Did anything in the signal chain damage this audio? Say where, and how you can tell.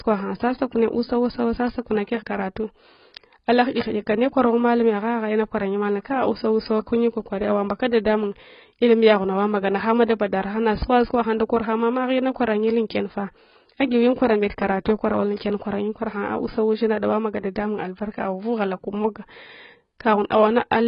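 Yes. Likely heavy AAC compression at the codec stage: nothing survives above 5.2 kHz throughout, fitting roughly 16 kbps, leaving speech dull and smeared.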